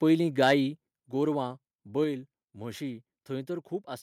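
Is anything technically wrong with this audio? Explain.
Yes. From 0.42 to 0.53 s the loudest peaks are flattened and crackle harshly, about 4 dB over full scale; this is likely microphone overload clipping a small fraction of samples at the converter. At 1.02 s the level drops abruptly by about 5 dB, then by about 2 dB at 2.04 s, likely a microphone volume step-down by software reducing input gain after the overload.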